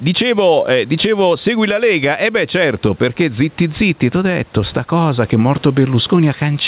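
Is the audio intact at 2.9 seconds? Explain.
No. At 2.9 s the speech is affected by gain pumping, which runs through the whole clip: the gain swings by around 10 dB, pulling down under each loud sound, likely from excessive input gain driving a fast limiter. Unlike a noise gate, the background never cuts to silence.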